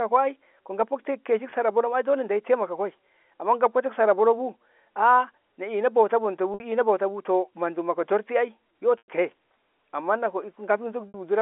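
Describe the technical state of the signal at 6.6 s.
Packet loss with pitch repetition spans 6.54 to 6.60 s. About 60 ms of data went missing, which fits three 20 ms packets, and the receiver looped the last pitch period to bridge the gap. The sound briefly holds as a steady, buzzy tone that fades before speech cross-fades back in.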